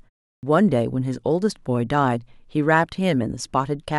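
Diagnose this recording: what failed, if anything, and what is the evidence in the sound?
Clipped start after a pause at 0.31 s: the playback device slept during the 0.3 s silence, so speech begins abruptly, its first 0.12 s swallowed while the output woke.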